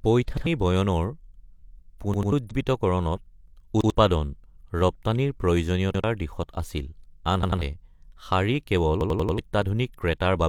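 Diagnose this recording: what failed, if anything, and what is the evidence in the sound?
Driver or buffer stage: repeated buffer. Late data made the device replay 93 ms pieces at 0.37, 2.14, 3.81, 5.94, 7.43 and 9.01 s, which fits a 4096-sample buffer.

Codec stage: compressed frames skipped. At 2.47 s the speech jumps ahead about 100 ms, roughly two 46.4 ms frames.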